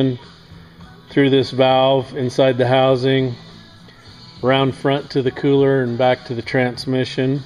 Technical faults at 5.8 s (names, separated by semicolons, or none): none